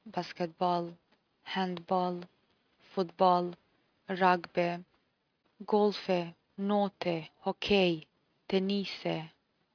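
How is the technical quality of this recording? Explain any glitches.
No glitches or technical faults can be heard anywhere here.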